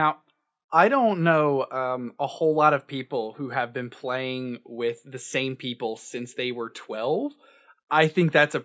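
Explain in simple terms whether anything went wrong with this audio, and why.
Nothing went wrong with this audio, because no fault can be heard anywhere in it.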